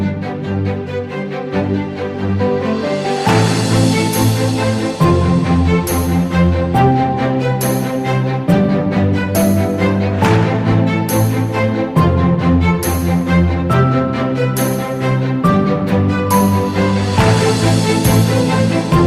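No technical faults can be heard at any point in the audio, and the signal stays continuous and steady throughout.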